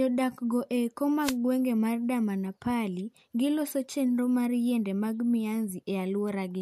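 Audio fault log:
1.21–1.36 s, wireless microphone noise hit: a short swish of static over the speech for about 0.16 s. The analogue FM radio signal faded as reflected paths cancelled at the receiver, so receiver noise briefly rose.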